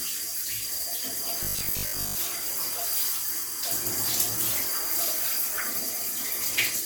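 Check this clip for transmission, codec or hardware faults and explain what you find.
Two faults are audible: a grainy coding texture across the whole clip and a short robotic stretch.

Throughout the clip, the upper frequencies sound breathy and grainy, with a noisy haze where fine detail should be. That plainly audible damage is likely Bluetooth LC3 compression, the LE Audio transform codec. When it runs short of bits it drops much of the upper spectrum and fills the gaps with noise, and here the texture fits 10 ms frames at a modest rate of around 48 kbps.

From 1.43 to 2.17 s the audio turns into a rigid, metallic buzz at 50 Hz. It still roughly tracks the underlying sound's shape. This is robotic sound from repeated short buffers. Fresh audio arrived too slowly, so the last chunk was replayed to fill the time, and about half the real material was skipped. Each repeat restarts at a fixed interval, and that interval sets the pitch. 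The 50 Hz buzz fits a 20 ms buffer looping.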